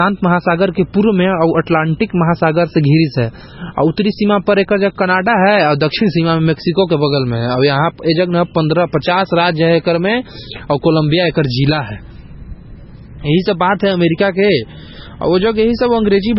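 Speech throughout carries heavy MP3 compression damage, likely from a very low bitrate around 16 kbps: nothing above 5.6 kHz, plus watery, swirling artefacts, metallic chirps on s sounds and smeared attacks. Those flickering artefacts separate it from a plain low-pass filter, which would only dull the sound.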